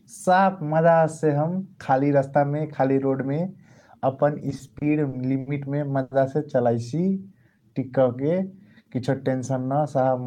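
From 4.49 to 5.48 s, repeated stalls (stutter): the jitter buffer ran dry six times, about 150 ms filled in total, with the longest gap 60 ms. The speech drags and judders, and the spectrogram shows short smeared, flat-topped patches.

At 6.02 to 6.13 s, a short stall from a late packet: one sound is held for 90 ms while the buffer waits. The waveform shows a repeated, slightly dipping stretch, and the spectrogram a frozen band.

From 6.86 to 8.58 s, a jitter buffer slow-down: repeated pitch periods add 197 ms, so the speech plays at 89% speed with unchanged pitch. Harmonics look stretched horizontally, not shifted.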